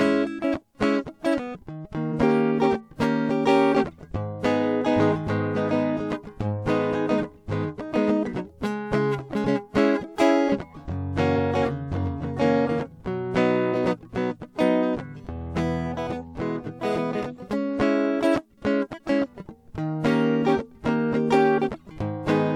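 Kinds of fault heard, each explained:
compressed frames skipped: at 2.12, 11.36 and 13.73–13.77 s, one missing 46.4 ms frame makes the music jump ahead.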